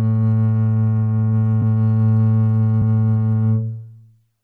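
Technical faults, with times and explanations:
1.61 s and 2.81 s, compressed frames skipped: the music jumps ahead roughly 50 ms, suggesting two missing 26.1 ms frames, with overlap smearing the join into a blip. A spectrogram shows a soft vertical smudge; the waveform shows a discontinuity without a click spike.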